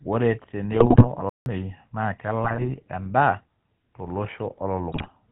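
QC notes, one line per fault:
Throughout: GSM full-rate codec. The speech has the gritty, buzzy roughness of the old 13 kbps GSM coder, plainly audible. The codec models the vocal tract as a filter fed by a sparse, regularly spaced pulse train, which leaves a rasp on voiced sounds, and nothing passes above 4 kHz. On a spectrogram the energy stops sharply at 4 kHz across the whole clip, and the harmonics look smeared rather than cleanly striped.
0.72–1.07 s, 2.44–2.68 s, 4.92–5.12 s: GSM bit errors. Each of these stretches breaks into squawks, pops and gargling. Corrupted bits are reaching the decoder, at an error rate of roughly 2 to 2.5 percent. Where a frame's filter, pitch or gain values are wrong, its spectrum bends or its level jumps for that 20 ms. The spectrogram shows blocky frame-length smears and bright vertical bursts, and the waveform has sudden amplitude spikes within each span.
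1.29–1.46 s: playback stall. The sound cuts out mid-flow for about 166 ms and then picks up again. The likely cause is that the player ran dry of data or its thread was blocked, so the output held silence until it recovered. The waveform shows a flat line with abrupt edges, and the spectrogram has a clean vertical gap across every frequency.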